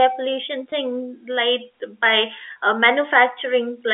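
Speech carried over a telephone path that sounds like G.711 coding, with the usual narrow line band, has two kinds of fault. Packet loss with pitch repetition occurs twice. From 0.70 to 0.72 s a 20 ms gap, which fits a single lost packet, was bridged by the receiver repeating the last pitch period, so the sound briefly holds with a slight buzz. From 2.52 to 2.56 s a 40 ms gap, consistent with two consecutive lost packets, gets the same treatment for longer, giving a held, buzzy stretch as the repeated cycle fades before the speech resumes. A loudspeaker feedback squeal runs from 1.05 to 2.28 s. A microphone picked up the loudspeaker it was feeding, and around 4.2 kHz the loop gain exceeded one, so that frequency reinforced itself on every pass. It swells over roughly the first 0.7 s into a steady, piercing tone that ends up a few dB louder than the speech.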